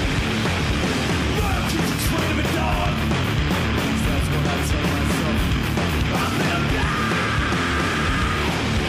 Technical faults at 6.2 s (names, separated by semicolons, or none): none